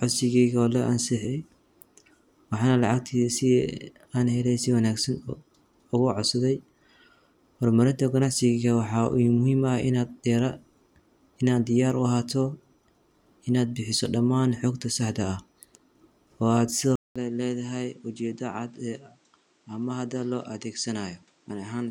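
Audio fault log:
16.96 to 21.91 s, input switched to a poorer device. After a 200 ms gap, the sound drops about 10 dB and stops at 9.4 kHz. Fresh background noise sits about 35 dB down. Likely a different microphone took over.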